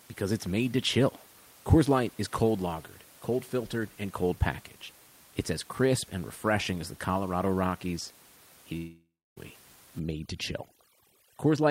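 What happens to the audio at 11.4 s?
At 11.4 s you're inside a stretch of overdone noise removal that runs from about 9.99 s to the end at 11.70 s. The noise reducer is clamping hard on any frequency band sitting near its noise estimate, so the room noise, which sat about 26 dB under the speech, collapses into near silence with little twinkling specks. The quieter parts of the speech get pulled down with it.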